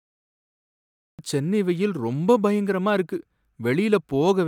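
The audio begins with digital silence until 1.19 s, then jumps straight into the speech mid-sound. This is a cut-off start. Capture began late, so there is no natural attack or fade-in. The speech enters abruptly at "சென்னை வெயில் ரொம்ப பயங்கரமா".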